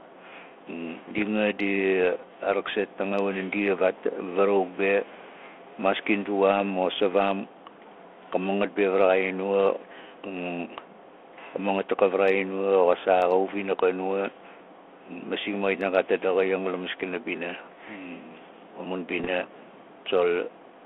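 Near the end, from 19.18 to 19.27 s, the speech breaks into a short cluster of pops and rough, grating bursts with brief jumps in level. These are bit errors on an ADPCM link: the telephone-band G.726 stream at 32 kbit/s had bits flipped at a rate around half a percent. Each wrong bit throws off the decoder's step size and prediction, so the damage rings on across a few frames.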